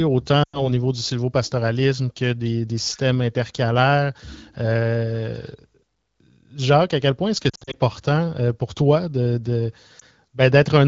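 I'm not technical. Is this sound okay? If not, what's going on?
No. The speech has lost AMR speech frames. On a mobile call, radio errors can spoil small pieces of the signal. The phone then fills each gap by repeating the last good sound and letting it fade. From 0.43 to 0.71 s, about 100 ms goes missing just before "niveau du sylvopastoralisme que", so the voice drops out to near silence. From 7.49 to 7.75 s, short gaps are scattered over about 240 ms. At 10.0 s, right after "euh pour toi de", there is one brief blip.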